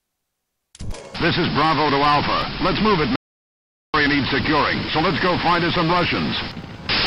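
At 3.16 s the sound stops dead and does not resume until 3.94 s, leaving a gap of about 0.78 s that is complete silence, with no room tone or background underneath it. This is an audio dropout to silence, likely caused by the input briefly failing, through a loose connection, a dropped link or an accidental mute, while the recorder kept writing silence. Whatever happened during that stretch is simply missing.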